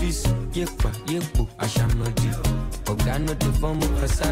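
Evenly spaced ticks land once a second from 0.75 to 3.75 s: periodic USB or driver dropouts, each briefly blanking about a millisecond of audio with silence.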